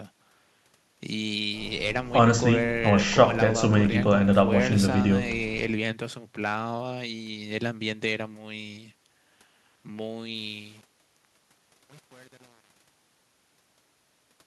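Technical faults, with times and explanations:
10.34 to 14.46 s, truncation distortion on a fade: as the speech fades out over roughly the last four seconds, the tail turns gritty and grainy instead of thinning away cleanly. The fade stage is keeping only 7 bits without dither, so as the level drops the waveform is forced onto a few coarse square steps, and the smallest details snap to zero.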